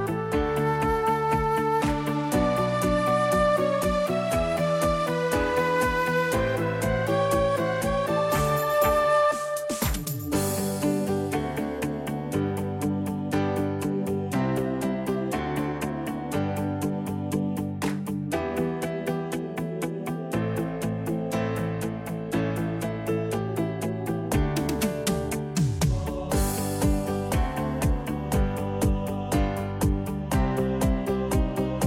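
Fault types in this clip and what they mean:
Nothing here stands out as a technical problem; the audio sounds steady and intact all the way along.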